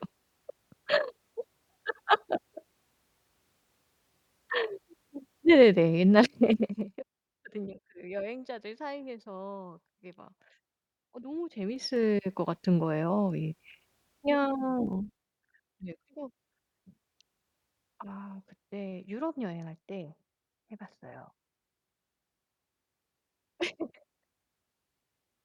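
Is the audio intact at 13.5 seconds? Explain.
Yes, at 13.5 seconds the speech runs through without any audible dropout, distortion or other technical fault.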